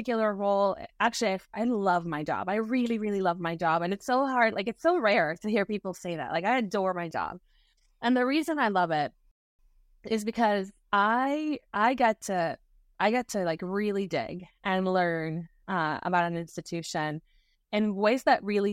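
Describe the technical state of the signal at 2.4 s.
At 2.4 s the speech signal is intact, with no audible dropout, distortion or other technical fault at that moment.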